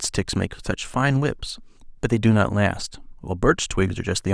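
No technical faults are audible.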